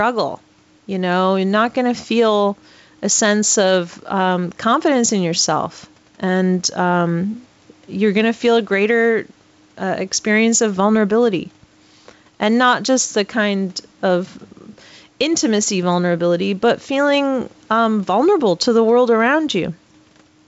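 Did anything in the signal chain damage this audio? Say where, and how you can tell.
Yes. Gain pumping runs throughout, at the capture gain and call-processing stage. The gain swings by roughly 5 dB, pulled down under each loud syllable, likely from mic gain set far too high feeding a fast limiter. The waveform envelope looks flattened, and a spectrogram shows the noise floor breathing between phrases.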